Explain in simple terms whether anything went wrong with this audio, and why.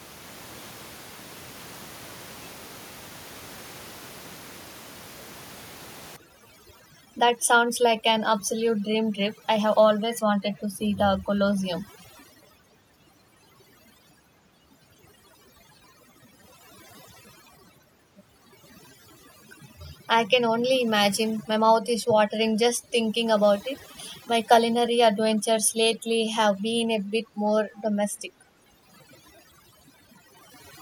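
Overdone noise removal sets in at 6.16 s and lasts to the end of the speech. A noise-cleaning step pushed too hard, shutting off quiet slices of sound along with the room noise, so the background drops and breaks up into twinkling specks.

Echo leak appears as two brief, faint repeats of the voice at 10.14 to 10.21 s and 10.56 to 10.61 s, arriving about a third of a second late, the second one very faint. This likely comes from a loudspeaker on the far end whose echo canceller let a scrap of its own playback slip back into the call.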